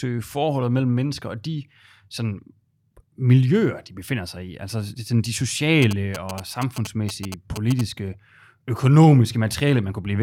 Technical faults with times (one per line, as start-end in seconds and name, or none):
5.82-7.81 GSM signalling bursts